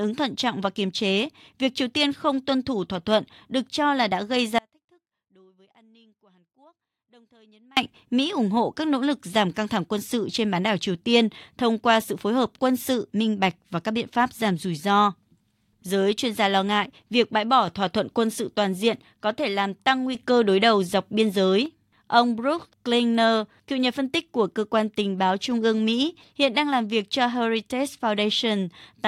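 Right after "cho là đã gây", from 4.59 s to 7.77 s, the speech abruptly vanishes, leaving only faint sound roughly 35 dB down for about 3.2 s. This audio dropout to a faint residue likely comes from the signal breaking while the later path stayed live.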